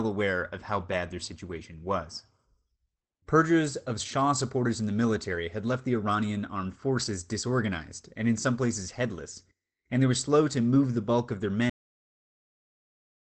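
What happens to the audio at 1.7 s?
Nothing goes wrong at 1.7 s: the speech passes through intact, carrying only the ordinary coding character of the call path.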